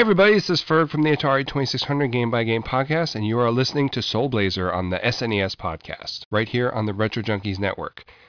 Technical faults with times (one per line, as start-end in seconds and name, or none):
none